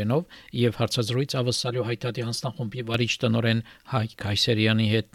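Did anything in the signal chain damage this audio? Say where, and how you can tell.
Yes. From 1.56 s to 2.94 s the audio turns hollow and phasey, with a tunnel-like colour that clears once the stretch ends. This is channel delay causing comb filtering. It points to the driver or buffer stage, where one channel ran late by roughly 5 ms before the pair was summed to mono. Content shared by both channels cancels at evenly spaced frequencies, starting near 100 Hz and repeating about every 200 Hz, which carves the fixed notches you hear.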